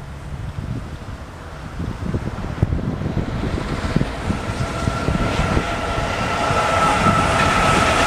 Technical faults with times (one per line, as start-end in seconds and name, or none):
none